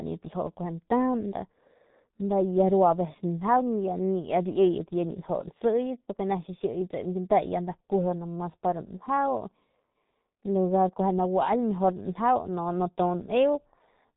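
Throughout the speech, heavy G.723.1 codec damage is audible: the codec's 30 ms frames and a rate that fits about 6.3 kbit/s leave a muffled, hoarse sound with smeared consonants. A spectrogram shows a hard ceiling near 3.8 kHz and coarse, blocky harmonic detail below it.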